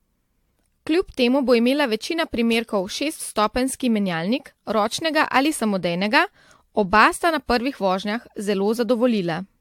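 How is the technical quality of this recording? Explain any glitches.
The technical quality is compromised by one fault that runs through the whole speech clip. Generation loss is present from start to finish: the sound is swirly, smeared and hollow, with blurred consonant attacks, most likely from about five successive lossy encodes, which fits repeated AAC at around 96 kbit/s. Each pass requantises on a shifted frame grid, so errors accumulate. A spectrogram shows patchy holes and speckled noise in the upper bands, and the waveform shows softened transients.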